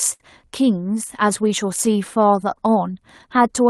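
Speech, heard through an Opus call path with audio up to about 12 kHz. Clock drift between sender and receiver runs through the whole clip. The sender's clock is roughly 4% slow, so the jitter buffer keeps draining. At 0.13 to 0.23 s there is a short stall from a late packet. A sound is held for about 64 ms, then speech resumes where it stopped, with nothing lost. From 1.23 to 3.61 s come repeated timing corrections. The receiver repeats small pieces to keep pace, adding roughly a tenth of a second. Playback runs at about 96% speed, with slight, uneven hiccups.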